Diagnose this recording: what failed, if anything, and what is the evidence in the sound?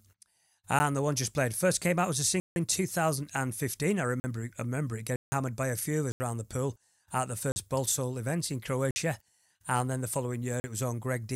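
The driver or buffer stage missed its deadlines and output zeros, leaving blocks of digital silence at 0.79, 2.40–2.56, 4.20–4.24, 5.16–5.32, 6.12–6.20, 7.52–7.56, 8.91–8.96 and 10.60–10.64 s. These gaps last 10 to 160 ms and cut in and out with no fade, so the speech is broken by ticks and short holes.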